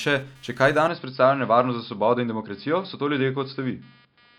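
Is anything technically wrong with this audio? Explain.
Yes, there are two faults.

Computer activity noise runs through the whole clip. A faint buzz pulses at roughly 200 times a second, sitting about 35 dB below the speech. It comes from the computer, not the speaker. Changing load in the processor, graphics card or mouse pulls on the ground the audio circuit shares. That ground movement leaks into the signal as a buzzing texture. It follows the machine's activity and ignores the speech.

From 0.88 s to the end, the speech turns duller. Everything above 5.2 kHz is gone, so the sound narrows and loses its air. There is no gap at the change, and the level stays about the same. A new, very faint noise floor appears, roughly 55 dB down. This is likely an input switched to a poorer device, such as another microphone or a headset's call profile, with a narrower band and its own tone.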